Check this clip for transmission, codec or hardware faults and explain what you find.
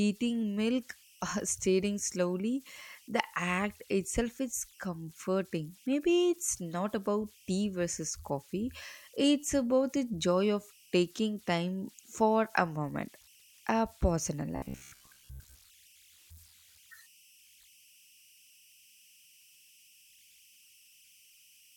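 Two faults are audible in this speech clip: a constant converter whistle and a brief stretch of robotic buzzing.

Converter idle tones run throughout. An undithered delta-sigma converter settles into repeating bit patterns at low input levels, producing a faint whistle around 3 kHz in the pauses and a grainy layer under quiet speech, about 31 dB below the signal.

Robotic sound from repeated short buffers occurs from 14.56 to 15.58 s, right after "a pause in a". New audio likely arrived too seldom, so playback looped a short fragment, about 15 ms, while most of the real audio was skipped. The loop imposes a rigid 66.8 Hz metallic buzz that only loosely follows the speech.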